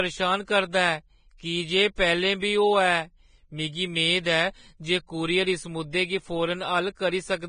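Speech, with heavy lossy-codec damage throughout. Nothing is present above 9.7 kHz, so the top end sounds dull and cut off. The remaining treble is hissy and grainy, and voiced tones have a rough texture. This is likely Vorbis compression at a very low quality setting, which fits a bitrate of about 22 kbps. At that rate the encoder lowers its cut-off and quantises the upper spectrum so coarsely that fine detail turns into noise of similar energy. Three sharp onsets show pre-echo: 0.45 to 0.48 s, 1.37 to 1.40 s, and 1.96 to 1.98 s. Each attack is preceded by a brief hiss lasting 22 to 27 ms, and the onset itself sounds softened. The transform block spreads its quantisation noise across its full length. The noise sized for the loud attack therefore leaks into the quiet moment just before it.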